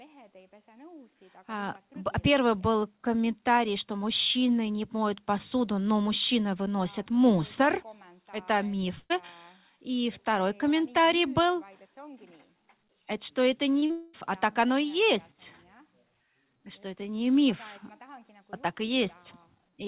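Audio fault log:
8.98–9.12 s, burst of packet loss: about 120 ms of packets never arrived, so the receiver extended the last sound as a fading buzz or hiss, then 20 ms of silence.
13.80–13.84 s and 13.86–13.91 s, short concealed packet loss: about 20 ms, then about 40 ms, went missing; the receiver patched each gap from the preceding sound, leaving brief smears.
13.91–14.15 s, long network dropout: the sound becomes a fading, continued buzz or hiss for about 220 ms, likely from the network delivering nothing, and resumes further on.
15.32–15.42 s, one channel drops out: the level drops abruptly by about 6 dB for 100 ms, likely because one stereo channel vanished before the mono sum.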